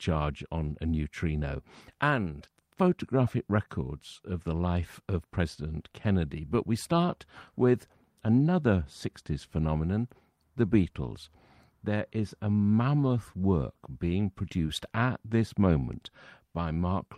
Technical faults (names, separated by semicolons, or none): none